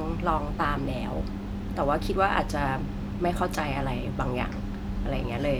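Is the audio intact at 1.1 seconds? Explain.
Yes, the audio is intact at 1.1 seconds, with no dropout, click, distortion or other technical fault audible at that point.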